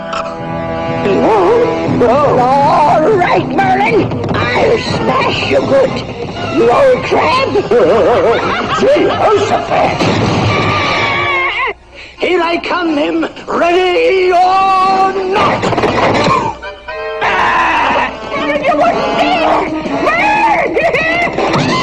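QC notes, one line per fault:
Throughout: hard clipping. The sound is driven about 7 dB past the limit of a stage that cannot pass it, so every peak is sheared off flat and roughly one sample in twenty is cut at that stage's limit. Those squared tops add harmonics high up the spectrum, heard as a gritty crackle whenever the level rises. The waveform shows flat plateaus on the peaks. On a spectrogram, bright vertical smears reach into the upper kHz range on each loud moment.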